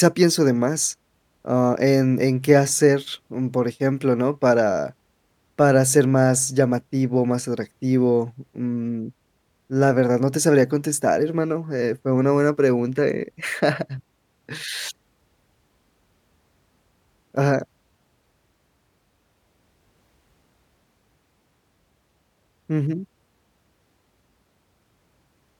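No technical faults detected.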